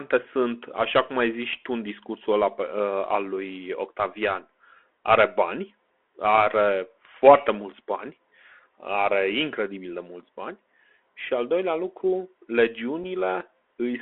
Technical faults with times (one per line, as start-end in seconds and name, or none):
0.00-14.02 Bluetooth CVSD headset codec
13.04 unconcealed Bluetooth headset packet loss